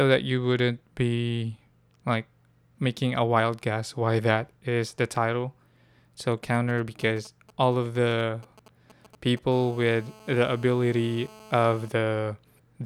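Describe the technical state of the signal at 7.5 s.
At 7.5 s you're in GSM signalling bursts, 6.32 to 9.39 s: a nearby 2G phone's radio bursts get rectified, giving a galloping dit-dit-dit of short 217 Hz buzzes well under the speech.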